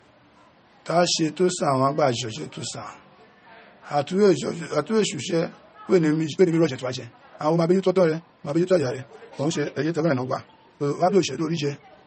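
A speech recording with two faults. Nothing is audible above about 8.4 kHz, and MP3 artefacts persist throughout. This is likely low-bitrate audio saved at a high bitrate, from 32 kbit/s MP3 re-encoded at 192 kbit/s. From 6.2 s to the end, the pace jumps to about 1.83 times normal while the pitch holds. The sound turns rushed, pointing to a likely time-stretched section.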